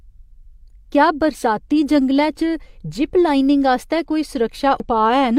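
At 4.80 s, damaged data in a compressed stream: part of the encoded speech is corrupted, so the decoder cannot read the frame at that point as valid audio. It loses its place in the stream and hunts for the next frame header before decoding resumes. The result is a very short, unnatural blip in the speech, lasting only about 4 ms, before the sound picks up again.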